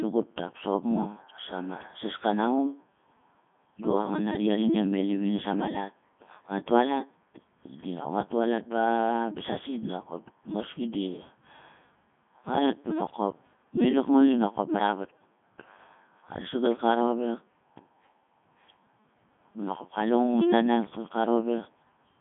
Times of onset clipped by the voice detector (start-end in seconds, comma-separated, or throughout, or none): none